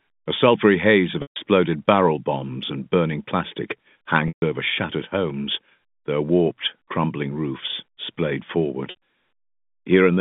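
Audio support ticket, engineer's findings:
Packet loss with pitch repetition, 1.22–1.36 s, after "a sulphury haze of": about 140 ms gap. The receiver's concealment looped the last pitch period, then faded it to silence. On the waveform, identical repeating cycles shrink to flat. On the spectrogram, frozen harmonics fade out. The gap fits seven lost 20 ms packets.

Same fault at 4.28–4.42 s, after "bombs and burning plastic": about 140 ms, the same held buzz fading to silence.

8.90–8.95 s, after "warped crumbling roofs splayed": a shorter loss of about 60 ms, with a brief buzzy hold and short flat harmonics. The G.711 band edge at 3.6 kHz stays steady across all three.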